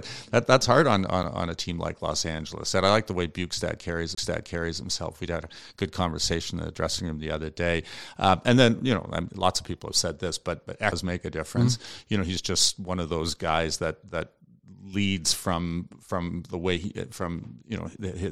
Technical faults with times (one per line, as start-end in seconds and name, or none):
1.23 gap between stream segments
4.15-4.17 CD skip
10.92 CD skip